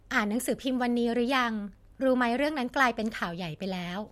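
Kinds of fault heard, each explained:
Wi-Fi interference: a Wi-Fi radio sitting close to the audio circuitry is having its transmissions rectified by that circuit, so each beacon it sends every 102.4 ms turns into an audible click. In this speech clip that gives a steady ticking just under ten times a second, starting at about 1.29 s and running to the end. It sits very faintly, far beneath the speech, and is easiest to catch in the pauses.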